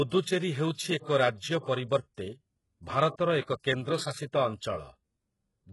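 Throughout the speech, s sounds turn gritty and metallic, with nothing above 11.5 kHz. This is likely HE-AAC compression, rebuilding treble from copied lower bands at a bitrate near 12 kbps. A spectrogram shows blocky, repeated high-band patches cut off sharply at 11.5 kHz.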